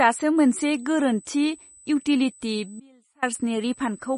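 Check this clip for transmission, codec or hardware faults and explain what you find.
Three faults are present: codec damage, a USB whine and one dropout.

Throughout, a starved encoder, likely MP3 compression at a low bitrate around 32 kbps, strips everything above 10.5 kHz, leaving the speech dull, watery and plainly degraded.

From 0.37 s to the end, USB whine from bus current leaking into power or ground adds a steady 8 kHz tone about 30 dB below the speech.

From 2.80 s to 3.22 s, an audio dropout to a faint residue cuts the speech abruptly for about 420 ms, leaving only a faint trace roughly 30 dB down.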